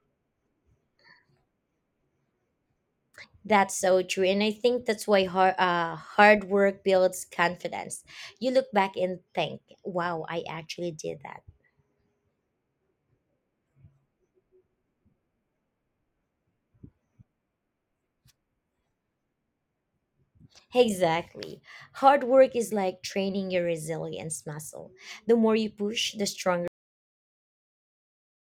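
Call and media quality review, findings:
Cut-off end at 26.68 s, right after "more you push the". Speech stops mid-sound, straight to digital silence until 28.49 s. Final buffers never written or played out.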